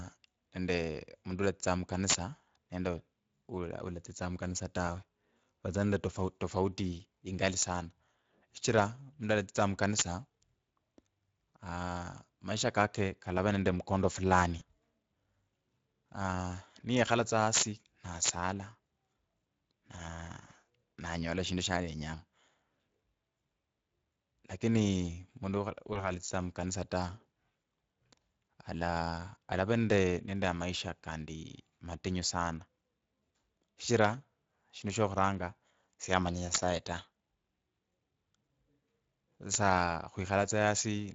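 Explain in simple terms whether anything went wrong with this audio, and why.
The whole recording runs through the Speex codec with too few bits, so the speech sounds noisy and a bit hoarse, with a grainy, thin top end.

There's integer overflow at 2.10, 7.63, 9.99, 17.54, 18.25, 36.54 and 39.54 s: loud peaks wrap around to the opposite extreme, giving sharp, violent cracks, harsher than ordinary clipping.

VoIP packet loss concealed by the speech codec hits at 14.59 s, just after "kalava nende mkondo fulani", and at 25.93 s. The decoder fills each missing chunk by guessing, leaving a brief smear that fades.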